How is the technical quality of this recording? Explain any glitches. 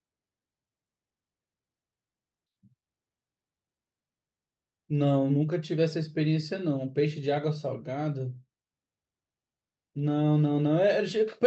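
No glitches or technical faults are audible anywhere here.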